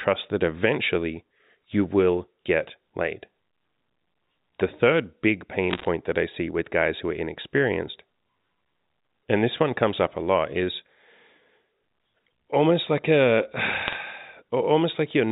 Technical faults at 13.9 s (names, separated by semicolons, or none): bit errors on a digital phone line